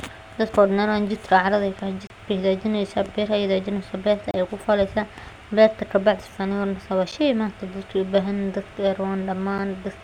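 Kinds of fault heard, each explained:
Gap at a join of encoded pieces: speech cuts to short silences or deep dips with smeared edges (30 ms at 2.07 and 4.31 s, 8 to 9 ms at 7.12 and 9.58 s), then resumes; separately encoded segments were joined with encoder delay and end padding untrimmed.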